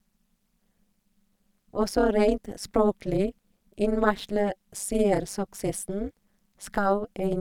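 Speech carries overlap-add ripple for its whole length. The level pumps around 200 times a second, swinging by about 60 dB, so the sound takes on a metallic buzz. Windowed frames were rejoined with an overlap that never sums to constant gain.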